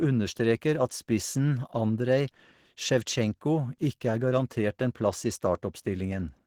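Opus compression runs throughout, with plainly audible codec damage: the speech sounds hoarse and grainy, with tones turned rough and noisy. This likely comes from Opus hybrid mode at a low bitrate, which fits about 16 kbps, with nothing present above 20.2 kHz.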